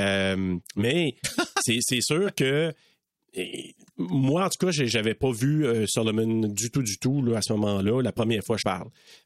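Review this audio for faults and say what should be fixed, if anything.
Broken MP3 bit reservoir, 8.61 to 8.63 s: the speech skips ahead briefly, likely from a dropped frame leaving the next one decoding the wrong bytes.

To prevent it, edit the decoded audio and re-encode, or use a splicer that respects MP3 frames and their reservoir.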